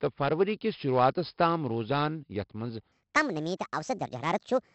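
A speech clip with a gritty hiss riding on every loud syllable and harsh edges on sharp consonants. This is heavy 4-bit ADPCM compression. Each sample is coded as a coarse step from a prediction, so the error grows with the level and the step size can't keep up with fast attacks. The bitrate is around 44 kbps. From 2.92 s to the end, the speech turns high and hurried, 1.52 times too fast and roughly seven semitones up. This is a section at the wrong speed, likely from that stretch being played against the wrong clock.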